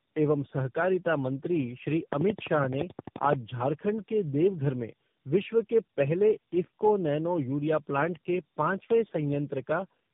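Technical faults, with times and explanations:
Throughout, tandem speech coding: rough, warbly, muffled speech, consistent with three codecs re-encoding each other's losses; spectrogram shows smeared harmonics and nothing above 3.7 kHz.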